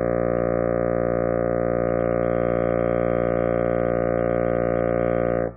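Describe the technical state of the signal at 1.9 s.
At 1.9 s the music plays through intact, with no audible fault in the signal at that moment.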